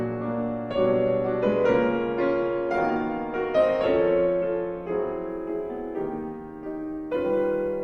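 From 5.30 s to the end, the audio carries sample clock jitter. An unstable converter clock, wobbling by a microsecond or two, shifts sample instants so steep waveform slopes pick up error roughly 45 dB down. On a spectrogram this shows as a faint broadband haze that tracks the loud, bright passages and vanishes in gaps.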